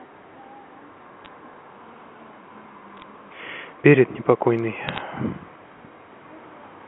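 Bit errors on a digital phone line crackle over the speech at 1.25–1.28 s, 2.97–3.02 s and 4.89–5.01 s. Flipped bits in the G.711 A-law stream each corrupt one sample, giving sharp ticks. These show as isolated waveform spikes and thin vertical spectrogram streaks.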